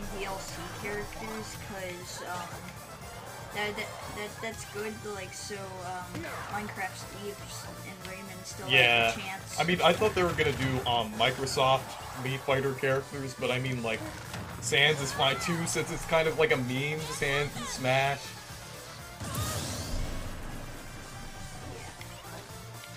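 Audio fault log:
No fault in the audio.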